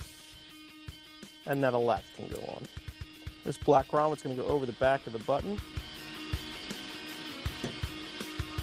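At 0.33 s the audio has a skip ahead: about a second of material is dropped and the two sides are butted together with no gap, showing as an abrupt seam in the waveform and spectrogram. From 1.92 to 4.84 s a jitter buffer speed-up plays the audio at 118% speed with pitch unchanged, trimming about half a second by cutting short pitch-period pieces. On a spectrogram, events look compressed in time while harmonic spacing stays the same.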